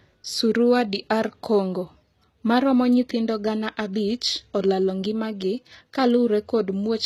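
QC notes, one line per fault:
throughout: HE-AAC compression. The speech was likely passed through an HE-AAC encoder at a low rate; the plainly audible damage fits a bitrate around 20 kbps. Only the lower spectrum is coded, and the treble is rebuilt by copying lower bands upward under a coarse envelope, so its harmonics fail to line up with the ones below. S sounds come out gritty, metallic and lispy, and nothing is present above 14.9 kHz.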